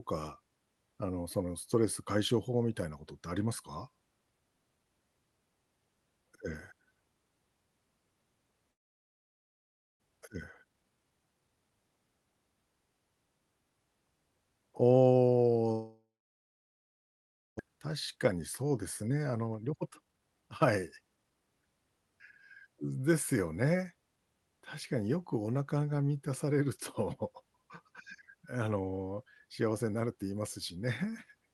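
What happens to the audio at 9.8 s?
At 9.8 s you're in the middle of a gap that runs from about 8.71 to 10.04 s, most likely a long network dropout. Audio stopped arriving, so the receiver stretched the last bit of sound into a buzzy tail that fades out, leaving near-silence by this point. When sound returns just after 10.04 s, about a second of the original is simply gone, and the timing has shifted by a few tenths of a second.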